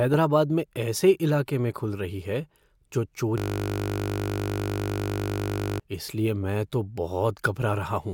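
From 3.38 to 5.80 s the speech freezes into a system hang loop: the playback system stalled while the hardware kept replaying one 20 ms slice over a hundred times, giving a steady 50 Hz buzz rather than the silence of a dropout or the irregular clicks of glitching.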